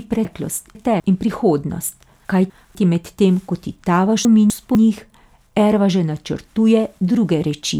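Chunks out of order: 250 ms blocks were written late, two places late at 0.25–1.0 s and one place late at 2.25–2.75 s and 4.25–4.75 s, so the speech jumbles.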